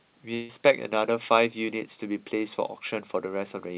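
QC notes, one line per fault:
0.34–0.51 s, long network dropout: the sound breaks off and a fading buzz carries the last sound on for about 0.15 s. Normal audio then resumes with a stretch skipped. This is likely lost packets, concealed by the receiver extending what it last had.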